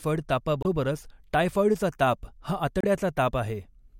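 Speech with two short bursts of damaged data in a compressed stream, at 0.61–0.66 s and 2.81–2.85 s. Corrupted bytes make the decoder misread frames and lose sync, producing a brief glitch. Each appears as a smeared broadband patch on a spectrogram and an abrupt, discontinuous blip in the waveform.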